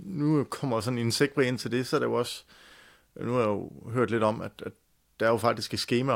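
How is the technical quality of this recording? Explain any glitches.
The technical quality of the recording is good, with no glitches to explain.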